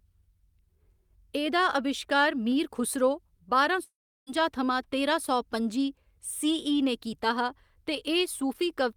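After "अविश्कार मीर खुसरो बारां", at 3.83 s the speech turns into a fading buzz, then about 0.36 s of silence. It resumes at 4.30 s on "थमां तेरां सौ पं'जी", about 0.44 s missing: likely a long network dropout, concealed and then muted.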